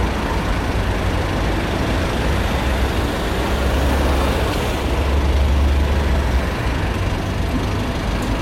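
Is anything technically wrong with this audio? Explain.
Yes. There is damaged data in the compressed stream at two points, 4.51 to 4.55 s and 7.46 to 7.50 s, each lasting about 40 ms. In both places the decoder meets corrupted frames, misreads or discards them, loses sync and hunts for the next valid frame header. The result is a brief chirp or blip.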